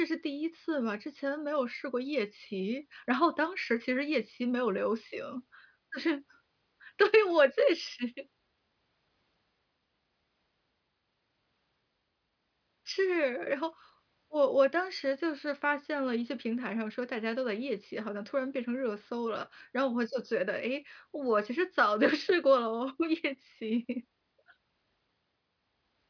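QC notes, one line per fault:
No faults found in this speech clip. Nothing in it needs flagging.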